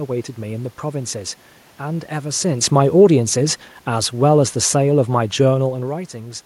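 From 2.63 s to 5.82 s the level slides steadily down by about 6 dB. This is automatic gain falling: the gain control judged the input too loud, or its background noise too strong, and wound its gain back over roughly three seconds. What separates it from the talker shifting position, which happens around two and a half seconds and again near five and a half, is that the room noise sinks together with the speech. A talker moving changes only the voice.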